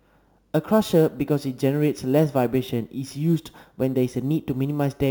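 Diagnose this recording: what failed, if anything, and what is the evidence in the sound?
Metallic fizz tracks the speech throughout, mirror images spanning 8–16 kHz at about -26 dB: imaging from sample-and-hold upsampling, 16 kHz to 44.1 kHz, unfiltered.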